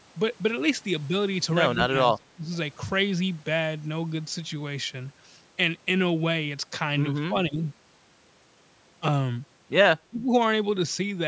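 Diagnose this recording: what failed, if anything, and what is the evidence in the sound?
The speech level collapses three times: from 1.86 to 2.52 s, from 7.28 to 7.62 s, and from 10.06 to 10.32 s. The drops are about 25 dB, about 15 dB and about 25 dB. This is likely speech suppressed in double talk at the call-processing stage. With both sides talking, the echo canceller treated near-end speech as loudspeaker echo and attenuated it. A waveform shows ragged notches in the envelope. A spectrogram shows the energy breaking into fragments within a band that tops out near 8 kHz.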